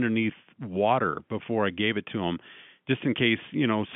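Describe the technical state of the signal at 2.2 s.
At 2.2 s the signal is intact, carried on the narrow telephone band of G.711 telephone coding, roughly 150 Hz to 3.5 kHz, with no fault at that moment.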